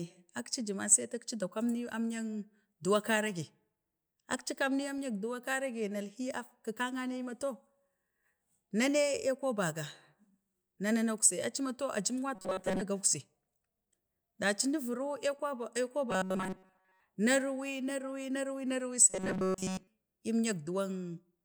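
Speech, with robotic sound from repeated short buffers at 12.35–12.83, 16.11–17.00 and 19.10–19.87 s: a rigid 188 Hz buzz, likely from most of the audio being replaced by looped 5 ms chunks.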